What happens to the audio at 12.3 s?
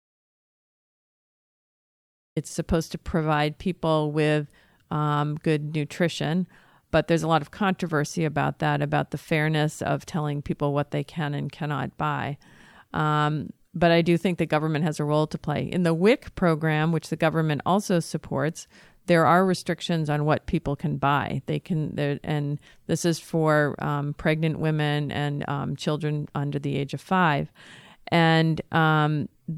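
At 12.3 s the speech carries on intact, with no dropout, click, distortion or other fault at that moment.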